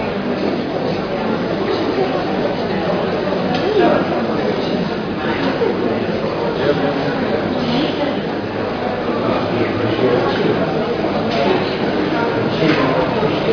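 No technical faults can be heard anywhere in the audio.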